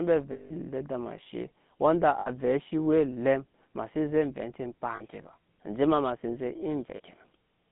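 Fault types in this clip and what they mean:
GSM full-rate codec: Present from start to finish, the speech carries the buzzy, gravelly roughness of the original GSM coder, which fits its 13 kbps rate. It rebuilds the voice from a vocal-tract model fed by sparse, regularly spaced pulses, so fine detail in the excitation is thrown away. The line is confined to roughly 150 Hz to 3.6 kHz, leaving the speech thin and without sibilant air, and the coding damage is plainly audible.
lost GSM frames: At 0.32 to 0.52 s, just after "mbi avɛ", the decoder had no good data and kept repeating the last frame's settings. That 180 ms gap becomes a rough, metallic held ring. Shorter holds of the same kind occur at 2.2 to 2.3 s, between "eshe wanda" and "cii we", at 4.96 to 5.02 s, and at 6.96 to 7.00 s, right after "sen zɛ".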